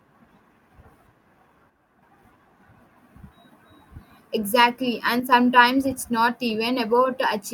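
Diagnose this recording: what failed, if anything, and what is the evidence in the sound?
The speech drops abruptly in level twice, by about 6 dB, from 1.70 to 2.03 s and from 5.20 to 5.32 s, just before "it's not". Each dip ends as suddenly as it starts. This is one channel dropping out, likely at the analogue wiring or a loose connector. When the stereo signal is summed to mono, sound common to both sides loses half its amplitude. Anything carried only by the lost side vanishes for that stretch.

Short concealed packet loss appears twice, at the network and codec stage. At 4.73 s about 10 ms of audio never arrived. From 6.47 to 6.50 s, right after "it's not", about 20 ms is missing. In each gap the decoder extended the preceding sound, repeating its pitch or filling with shaped noise, then blended back into real audio. The result is a brief smear or wobble rather than silence.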